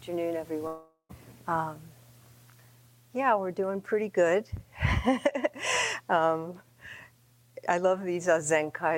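From 0.67 s to 1.11 s there is what is most likely a long network dropout: packets stopped reaching the receiver, so about 420 ms of the stream never arrived. The receiver tried to cover the hole by stretching the last sound it had into a buzzing, hissy tail that fades away, and the final 90 ms or so fall to silence. The audio then resumes at 1.11 s, with the missing portion simply gone.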